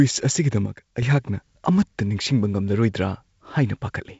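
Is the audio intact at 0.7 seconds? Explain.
No. A sudden gain jump runs from 0.66 to 1.02 s: the sound and its background noise drop together by about 7 dB, likely from a digital gain change applied without a ramp. The waveform steps abruptly down and back up, and the spectrogram dims evenly across all frequencies between sharp vertical edges.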